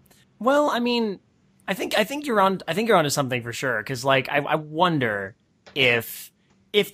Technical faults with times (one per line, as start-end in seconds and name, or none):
none